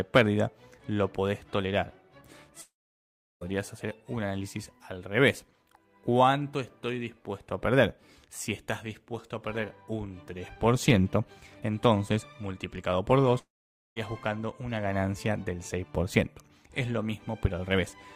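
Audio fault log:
2.61–3.43 s, long network dropout: about 0.8 s of audio is missing, likely because packets stopped arriving. The receiver briefly continues the last sound as a fading buzz for roughly the first 70 ms, then leaves about 0.72 s of silence before the audio resumes further on, with the lost stretch gone.
13.39–13.98 s, long network dropout: the same pattern over about 0.58 s, with a short fading fill followed by about 0.5 s of silence.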